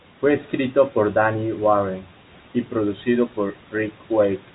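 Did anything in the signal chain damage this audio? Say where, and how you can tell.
No, the speech carries the narrow band of G.711 telephone coding, with nothing above about 3.8 kHz, and no stage in the chain adds any audible damage.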